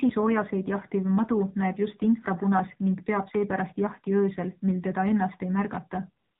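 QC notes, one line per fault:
Throughout: AMR narrowband mobile codec. The signal passed through the AMR-NB phone codec, which samples at 8 kHz and rebuilds speech from a vocal-tract model excited by a few pulses per 5 ms subframe. Nothing above 4 kHz survives, so the top end is gone and sibilants dull. The damage is plainly audible: a buzzy, synthetic edge on the voice that points to one of the lower bitrate modes, around 7.4 kbps, where too few pulses are available to capture natural excitation.
6.24–6.40 s: AMR comfort noise. The sender's voice activity detection judged the talker silent and stopped transmitting speech frames for about 165 ms at the very end. The receiver filled that gap with generated noise built from a coarse estimate of background level and spectrum. The real ambience is swapped for a smooth, steady hiss that switches in abruptly.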